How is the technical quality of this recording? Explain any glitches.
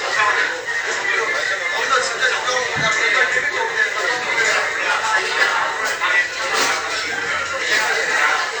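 No technical glitches can be heard in this recording of sounds. Nothing in it calls for explanation.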